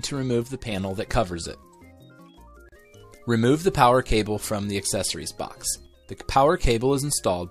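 At 0.43 s the level suddenly drops by about 6 dB until 0.72 s, and it happens again from 5.86 to 6.20 s. That's the classic sign of one channel dropping out, most likely one side of a stereo feed going missing before the mono fold-down.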